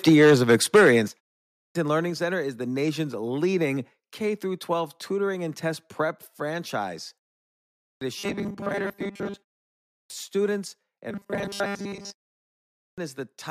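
From 0.07 to 0.89 s the opening has a harsh, crackling edge on its loudest moments. This is microphone overload: the input likely ran about 8 dB past the converter's ceiling, flattening the tops of roughly a tenth of the waveform. Unlike a codec artefact, the distortion tracks the peaks.

Alongside it come three instances of microphone volume stepped down. Voice and background drop together in a single step, by about 3 dB at 0.09 s, about 8 dB at 1.08 s and about 2 dB at 2.1 s. This is likely the call software cutting the device gain in reaction to the overload. A fade would slide, but these are instant.

Four times, speech resumes abruptly after silence with its first sounds missing. This is the clipped start after a pause, which occurs at 1.44, 7.66, 9.78 and 12.64 s. Each time, about 0.31 to 0.35 s is lost after a pause of 0.32 to 0.55 s while the output device wakes.

From 8.19 to 9.67 s and again from 11.11 to 12.52 s, the voice turns into a rigid metallic buzz pinned at 200 Hz. 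This is robotic sound from repeated short buffers. The software is likely looping 5 ms chunks, which matches that pitch, and most of the real audio in those spans is skipped. The fixed pitch distinguishes it from clipping distortion.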